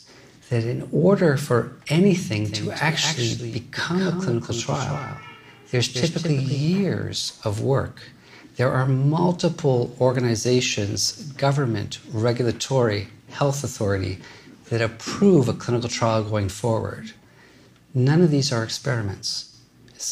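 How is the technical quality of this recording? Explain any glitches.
A doubled audio track runs from 2.45 to 6.65 s. A second full-band copy of the sound is heard about a fifth of a second behind the original and somewhat quieter, around 5 dB down. The likely cause is the same signal being captured again through a slower path. The copy has no decay or room colouring, so it sounds like a hard slapback rather than reverb. It starts and stops abruptly at those times.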